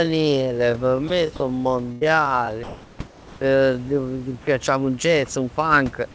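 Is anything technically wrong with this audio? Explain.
Yes, there are four kinds of fault here, all packed into the first four and a half seconds.

The first is a time-stretched section, running from the start to 4.49 s, just before "un jazz un funk". The pace is slowed to roughly half, about 0.54x, but the pitch holds steady. That likely comes from software repeating short chunks to pad the length, so the speech drags.

The second is sound dropped by the voice detector, at 1.08 s and again from 1.36 to 1.40 s. These are tiny gaps of 20 to 40 ms where the speech gives way to steady noise. The likely cause is the sender's detector mistaking the sound for background and going silent, with the receiver filling the gap.

The third is a burst of packet loss from 1.92 to 2.03 s, where about 100 ms of audio is missing. The receiver stretched the last bit of sound across the gap and let it fade, so you hear a brief held buzz or hiss before the speech jumps ahead.

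The fourth is comfort noise in place of the background, from 2.63 to 2.99 s and from 3.07 to 3.41 s. The real room background, sitting about 25 dB under the speech, turns into flat, featureless noise, about 1 dB louder in the first stretch and about 2 dB quieter in the second. That's likely synthetic fill played while the sender paused transmission. The whole thing has also been through a call codec that cuts everything above 8 kHz, which is normal for that path.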